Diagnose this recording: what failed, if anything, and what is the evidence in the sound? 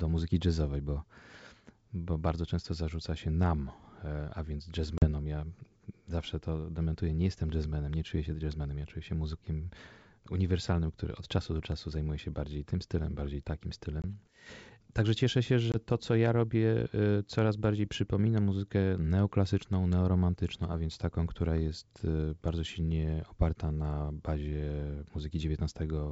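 Packet loss on an ADPCM call at 4.98 s (after "nam e a więc", 40 ms, about two packets), 14.02 s and 15.72 s (20 ms each). Network drops leave hard-edged silent gaps, and the G.722 decoder's predictor and step size briefly mistrack afterward.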